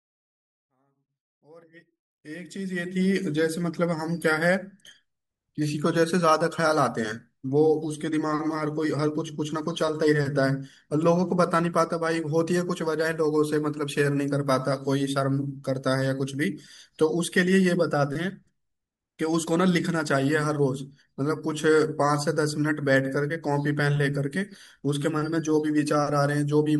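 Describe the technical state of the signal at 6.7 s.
At 6.7 s the speech signal is intact, with no fault present at that moment.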